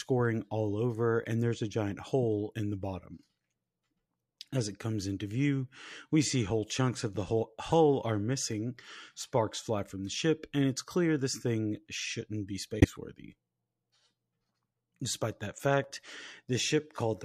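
At 7.70 s a compressed frame reached the decoder with flipped bits, and it was decoded anyway. This corrupt frame decoded puts energy at frequencies the speech never had, a faint blip peaking around -30 dBFS just before "are missing sparks fly". From 12.80 to 12.92 s, right after "this thing shouldn't be", roughly two damaged frames in a row are played, and the misread gains produce a much louder squeak-like burst, peaking near -10 dBFS.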